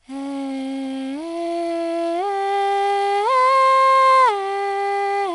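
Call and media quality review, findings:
4-bit ADPCM compression, whole clip. Encoder coding each sample as a 4-bit step from a prediction, about 88 kbps, which fits a sample rate near 22 kHz. Gritty hiss riding every loud passage of the music, roughening on sharp attacks. Nothing above about 11 kHz, so top end dull. Plainly audible.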